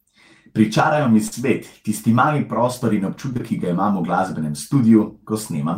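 At 1.27 s, then twice back to back from 3.33 to 3.41 s, there's short concealed packet loss: about 40 ms and two 20 ms chunks arrived too late, so the decoder stretched the preceding speech to cover them. Each spot comes across as a brief smear or wobble.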